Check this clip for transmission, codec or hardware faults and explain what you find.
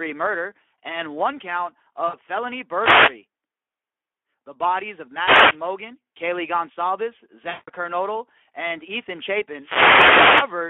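The clip has three faults: Speex codec damage throughout, two dropouts covered by packet loss concealment, and three bursts from wireless microphone noise hits.

Speex codec damage runs through the whole clip and is plainly audible. The speech sounds hoarse and noisy because the CELP coder has too few bits to model the excitation, which fits a bitrate of around 11 kbps. The band is limited to 300 Hz to 3.4 kHz, so it sounds like a telephone line.

VoIP packet loss concealed by the speech codec occurs at 2.07 to 2.17 s and at 7.49 to 7.70 s. About 60 ms and 180 ms of audio go missing. The decoder fills each gap by stretching its last pitch and filter state into a sound that fades. After the second, longer gap the speech stays weak or distorted for a short time, because each new frame is rebuilt from the damaged state.

A wireless microphone noise hit occurs at 2.71 to 3.22 s, at 5.16 to 5.61 s and at 9.57 to 10.59 s. 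In each one, the FM radio signal fades as reflections cancel it, and receiver noise rises. Each is heard as a swish or burst of static, and the last one is the longest, at about a second.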